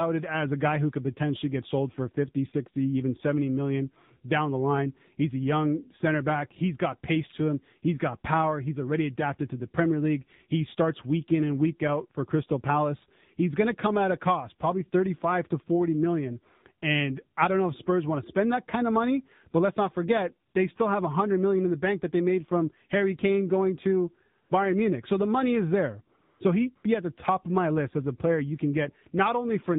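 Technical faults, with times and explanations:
Throughout: AMR narrowband mobile codec. The speech has been squeezed through AMR-NB at a rate that fits about 7.4 kbps. Nothing above 4 kHz survives, so it sounds muffled. The low bit budget gives the voice a plainly audible buzzy, synthetic edge.
20.50–20.54, 24.44–24.50, 26.18–26.40 and 26.76–26.84 s: AMR comfort noise. In four short pauses, lasting 40, 60, 220 and 80 ms, the phone stopped sending speech frames. Smooth synthetic noise fills each gap in place of the real background, switching in and out abruptly.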